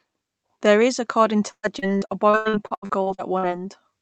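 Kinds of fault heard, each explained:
Repeated packet loss (robotic sound): Right after "is according", from about 1.51 to 3.45 s, the speech keeps losing small chunks of audio. Each hole is bridged by stretching out the sound just before it, giving a choppy, robotic texture. There are around fifteen breaks, the longest 116 ms, and roughly a third of that stretch is patched rather than real. Unlike a single dropout, the holes keep recurring across the stretch.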